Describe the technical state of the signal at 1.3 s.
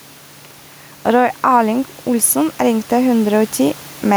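At 1.3 s the speech shows gain pumping, present across the whole clip. The gain swings by about 5 dB. The likely cause is a fast limiter pulling down an overdriven microphone gain. The room noise sits about 29 dB below the speech.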